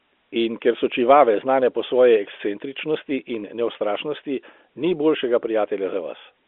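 Listening closely to this telephone-band speech, carried over G.711 coding with its usual upper limit below 4 kHz, nothing stood out as a fault at any point.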